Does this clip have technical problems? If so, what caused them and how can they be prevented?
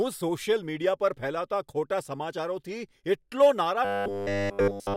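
Yes. Robotic sound from repeated short buffers runs from 3.85 s to the end at 4.96 s. A rigid 100 Hz buzz runs through the speech, likely because audio arrived too late and essentially every gap was filled by looping about 10 ms of old audio. Preventing it needs larger buffers or a steadier, higher-priority audio thread so fresh audio always arrives on time.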